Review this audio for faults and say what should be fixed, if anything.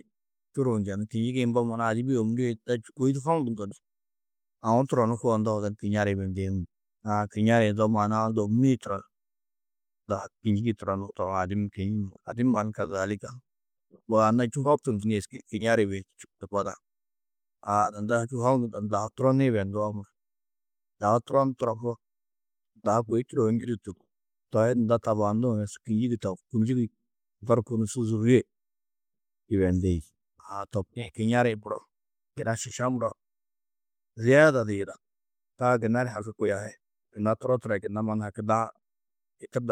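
No faults turn up in this audio, so nothing needs to be fixed.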